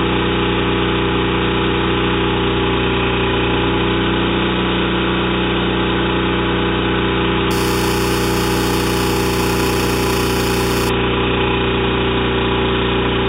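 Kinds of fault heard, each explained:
Imaging from sample-and-hold upsampling: from 7.51 to 10.89 s a bright metallic fizz rides on the sound, rising and falling with it at about 13 dB below. Each sample was simply repeated, which fits an 8 kHz source raised to 48 kHz, so mirrored spectra appear around multiples of 8 kHz. A spectrogram shows the 4 kHz to 8 kHz band filled with an inverted copy of the content below, and the waveform shows tiny flat steps.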